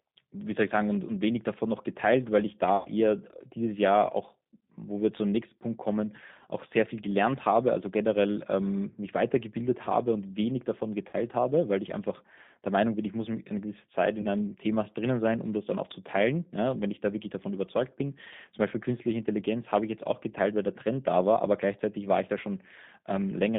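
The whole speech clip runs through a G.729 codec at 8 kbit/s, squeezed into a line band of about 150 Hz to 3.7 kHz. The codec rebuilds speech from a vocal tract filter, a pitch predictor and a few pulses per frame, so the damage is plainly audible as a rough, synthetic edge.

On top of that there's VoIP packet loss concealed by the speech codec, three times: 2.77 to 2.88 s (80 ms lost, which fits four 20 ms packets), 11.09 to 11.15 s (40 ms), and 14.22 to 14.27 s (20 ms). Each time the decoder stretches its last pitch and filter into a fading buzzy tone or coloured noise, and the sound stays weakened briefly after packets resume.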